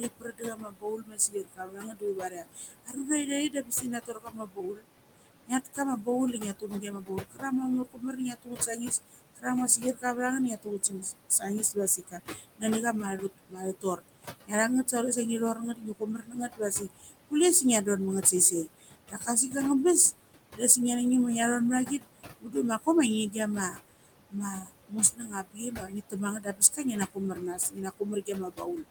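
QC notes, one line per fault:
Throughout: noise suppressor artifacts. The steady room noise, sitting about 10 dB under the speech, is pulled down by about 21 dB in the gaps and rises again beneath the voice. A spectrogram shows the noise floor pumping frame by frame, dropping away in the pauses.
0.00–14.94 s, 15.54–19.54 s, 20.52–20.62 s, 21.86–28.88 s: speech cut by the noise suppressor. Soft consonants and word endings were treated as noise and pulled down with the background, by about 19 to 22 dB at the deepest. This affects roughly seven seconds in the first range, about a second and a half in the second, a tenth of a second in the third and about four seconds in the last. These parts sound swallowed or faint. A waveform shows word tails collapsing abruptly, and a spectrogram shows the weak high-frequency consonant energy missing.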